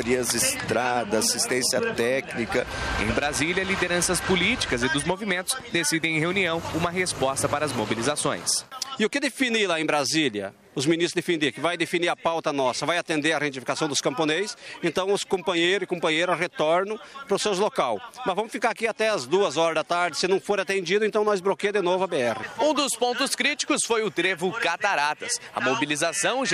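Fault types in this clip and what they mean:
Dropped samples: four isolated sharp clicks at 11.44, 13.18, 15.58 and 19.16 s, each a thin vertical line across the spectrum. The likely cause is a handful of samples missing from the stream, making the waveform jump abruptly to a later value.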